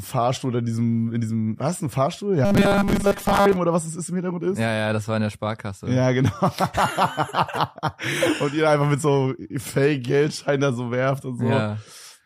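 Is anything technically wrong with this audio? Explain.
Yes. From 2.45 to 3.58 s there is robotic sound from repeated short buffers. A rigid, metallic 200 Hz buzz replaces the natural texture while loosely tracking it. The likely cause is audio arriving too seldom, so the same 5 ms chunk is replayed for roughly 70% of that stretch. On a waveform this appears as identical repeating cycles. A spectrogram shows a strict comb of harmonics spaced at 200 Hz.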